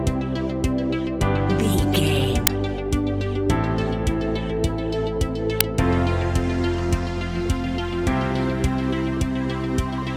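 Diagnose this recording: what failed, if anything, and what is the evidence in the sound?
The failure is at the driver or buffer stage: an uninitialised buffer was played out twice. At 2.47 s and again at 5.61 s there is a short, loud crack unrelated to the surrounding audio. The first lasts about 5.3 ms, which fits a 256-sample buffer, and the second about 2.7 ms, which fits a 128-sample buffer. Each time, a block was sent to the output before any audio had been written into it, so leftover memory contents were reproduced as samples.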